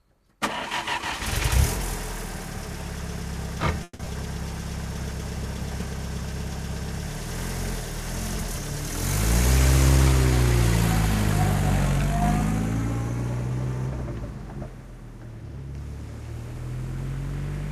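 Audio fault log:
3.83–4.08 s, long network dropout: the sound breaks off and the last moment is carried on as a fading buzz for about 230 ms, followed by roughly 30 ms of near-silence before the audio resumes. About 100 ms of material never returns, so the sound picks up later than where it stopped, and the timing afterwards sits around 70 ms later. This is likely a stall in packet delivery, with the receiver concealing the gap until data arrived again.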